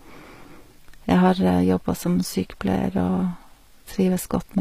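A speech clip with HE-AAC compression throughout: the treble is present up to a cut at 15.5 kHz but sounds rebuilt, with gritty, lispy s sounds. That points to likely spectral band replication at a low bitrate near 24 kbps, not a plain low-pass, which would dull the top instead.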